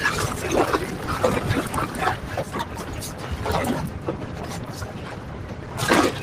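Throughout, a noise suppressor applied to music or sounds treats held tones and tails as noise, sinking them by around 5 dB while attacks mostly get through, unlike compressor pumping.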